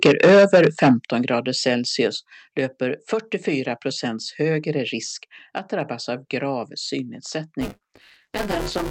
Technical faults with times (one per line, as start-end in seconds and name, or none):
0.02-0.92 microphone overload
0.06 microphone volume stepped down
1.05 microphone volume stepped down
2.07 microphone volume stepped down
7.61-8.91 buffer tearing